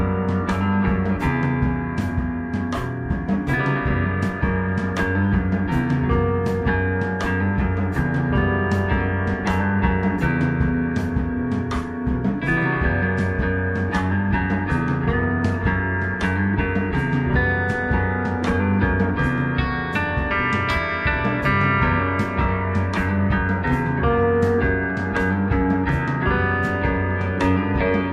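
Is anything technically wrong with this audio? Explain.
Yes. From 11.75 to 19.75 s the adaptive stream drops to a lower bitrate after the connection slows: the top end cuts off above 12.2 kHz, codec artefacts rise, and both switches are abrupt with no gap, which fits stepping from 96 to 48 kbit/s AAC.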